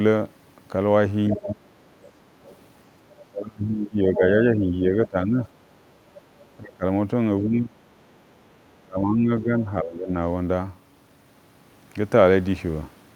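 From 1.31 to 1.53 s, and faintly again from 2.49 to 2.56 s, a second, quieter voice sits under the talker: the other side's voice leaking through, likely loudspeaker echo the canceller left behind.

The talker's level then dips sharply, by up to about 25 dB at the deepest, over 1.36 to 1.61, 3.31 to 5.39, 6.57 to 6.84, 7.40 to 7.76, 8.77 to 9.65 and 9.82 to 10.13 s. This is speech suppressed in double talk, likely the canceller turning down both sides when it could not tell them apart.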